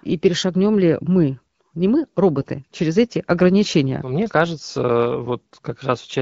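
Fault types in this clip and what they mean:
No faults can be heard.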